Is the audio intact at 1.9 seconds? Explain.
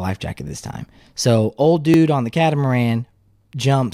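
No. A repeated buffer occurs at 1.94 to 1.96 s. New audio arrived late, so the device played its last 20 ms buffer one extra time. That tiny piece sounds twice with a hard join, heard as a brief click or buzz, with essentially no audio lost.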